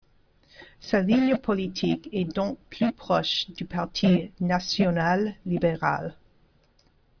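No technical faults are audible anywhere in the speech recording.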